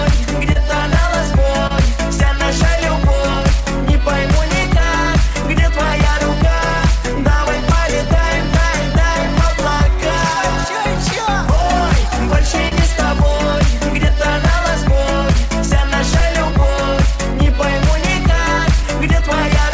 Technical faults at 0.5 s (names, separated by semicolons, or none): clock drift between sender and receiver; repeated timing corrections; short stall from a late packet